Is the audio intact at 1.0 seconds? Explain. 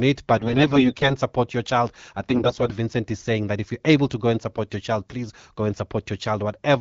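No. AMR bit errors hit from 0.37 to 1.15 s, just before "support your child I": at roughly a tenth of bits flipped, the excitation pulses and finer pitch, gain and spectral values go wrong, so the sound turns hoarse, scratchy and gargly.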